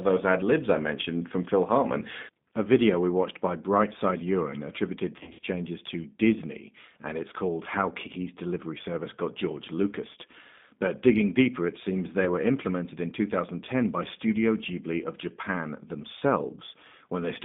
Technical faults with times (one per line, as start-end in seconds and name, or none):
0.00-17.45 G.729 codec
5.19-5.45 VoIP packet loss concealed by the speech codec
12.24-12.29 VoIP packet loss concealed by the speech codec